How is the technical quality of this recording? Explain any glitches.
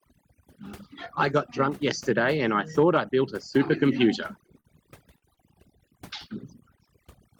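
The speech in this recording has two separate problems: heavy-handed noise suppression across the whole clip, and a cluster of brief timing stalls near the end.

Overdone noise removal runs throughout. The suppressor cuts individual frequency bands hard whenever they approach its noise estimate, so low-level parts of the voice disappear along with the background noise. The background drops and breaks up into twinkling specks.

Short stalls from a late packet occur at 4.46–4.51 s, 4.60–4.67 s, 5.18–5.25 s and 5.34–5.40 s. Each time, the jitter buffer ran dry and the receiver held the last sound for about 19, 40, 39 and 30 ms before resuming in the same place. Nothing is lost, but sounds drag briefly with a slight buzz or dip.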